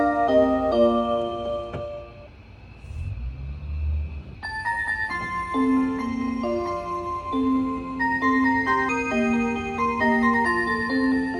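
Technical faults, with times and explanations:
Nothing technical goes wrong anywhere in this recording, so there's nothing to flag here.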